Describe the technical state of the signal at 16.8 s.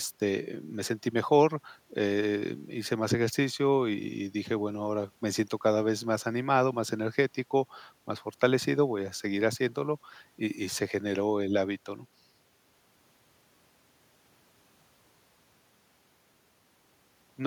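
At 16.8 s the speech is intact, with only the room's own background noise sitting about 41 dB below it.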